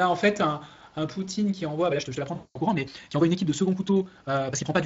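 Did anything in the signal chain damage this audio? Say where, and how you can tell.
Yes. From 1.84 s to the end, the pace jumps to about 1.82 times normal while pitch holds steady, so the sound turns choppy and rushed. This is likely a playback or editing time-stretch that drops short pieces to compress duration. On a spectrogram, harmonic spacing stays unchanged while syllables crowd together, and the waveform shows abrupt joins at the splice points.

Inside that stretched stretch, from 2.35 to 2.59 s, VoIP packet loss concealed by the speech codec shows up at the network stage. About 200 ms went missing, which fits a run of 20 ms frames. The decoder repeated its last pitch and filter at falling gain, producing a buzzy tone or coloured noise that fades, and the sound stays weak just after packets return. A spectrogram shows frozen, flat content decaying into smear, and the waveform envelope tapers off.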